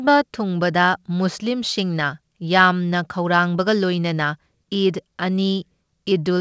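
No faults detected; the speech carries the ordinary coding texture of a wideband call path, consistent with G.722, with nothing above 8 kHz.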